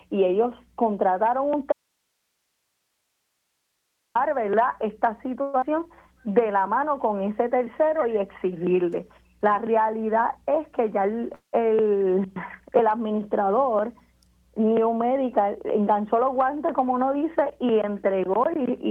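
From 1.72 s to 4.15 s the sound cuts out abruptly and leaves only a faint hiss, about 55 dB below the normal level, for roughly 2.4 s before it snaps back mid-flow. This is an audio dropout to a faint residue. The likely cause is that the wanted signal was lost while the path after the break stayed live, so only that background noise carried through. The sharp edges set it apart from a natural pause or fade.

At 5.41 s the sound turns into a buzzy continuation of the last moment that fades over about 0.2 s, ending at 5.64 s. There is no true silence, but when the audio resumes about 100 ms of it is simply gone. This is a long network dropout. The likely cause is that no packets arrived for that stretch, so the receiver extended the last sound to cover the hole. The jump at resumption fits a shift in playout delay of roughly 50 ms.

Right after, from 5.84 s to 6.57 s, the audio drags at about 89% speed with its pitch unchanged, and the sounds feel drawn out. 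That is a jitter buffer slow-down. After the loss the buffer was short of reserve, so the receiver repeated single pitch periods and bits of pauses many times in a row. Together they add about 89 ms and rebuild its cushion.

From 10.53 s to 11.30 s the sound hurries at about 107% speed, again at the same pitch. This is a jitter buffer speed-up. The buffer held more audio than its target, so the receiver trimmed short pieces of one or a few pitch periods, removing roughly 70 ms in total.

At 11.35 s the audio stalls into a fading buzz that drops to silence for about 100 ms, then picks up at 11.55 s exactly where it stopped, with nothing missing. This is a call audio freeze. Packets were likely held up in transit and the buffer ran dry, which put a 184 ms gap into the stream and added that much delay.

The second jitter buffer speed-up runs from 14.65 s to 15.76 s at about 108% speed. It cuts roughly 100 ms to work off excess buffered delay, and the sound again seems hurried at an unchanged pitch.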